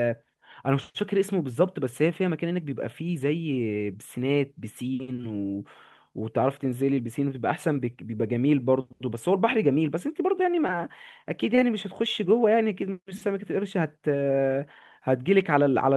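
Speech clip with three bits of short concealed packet loss, at 5.21–5.24 s, 10.67–10.69 s and 11.55–11.58 s. Dropped audio got patched over with 10–20 ms of extended sound, leaving quick smears or wobbles.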